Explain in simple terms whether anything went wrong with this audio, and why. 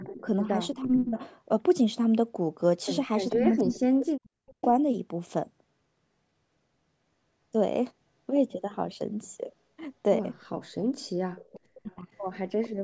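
Yes, two problems. Echo leak: a faint copy of the speech returns about 0.45 s late at 0.0–0.23, 3.3–3.76, 4.5–4.65, 10.57–10.75 and 11.37–12.68 s, likely from a loudspeaker whose echo canceller missed some sound. Speech suppressed in double talk: at 0.22–1.17, 3.35–4.61 and 10.75–12.06 s the speech dips, sometimes to near silence, likely because the canceller mistook overlapping talk for echo.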